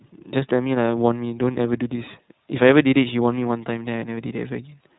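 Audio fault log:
throughout, iLBC codec: Nothing above about 3.9 kHz survives, so the speech sounds narrowband. Each frame's excitation is coded on its own, leaving a plainly audible rough, synthetic edge. The texture fits 30 ms frames at around 13.3 kbps.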